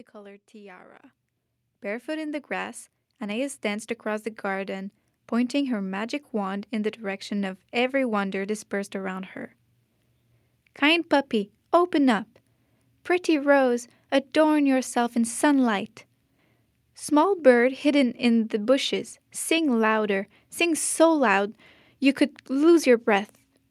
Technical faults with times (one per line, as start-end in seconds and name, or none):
1.02 microphone volume stepped up
4.32 microphone volume stepped up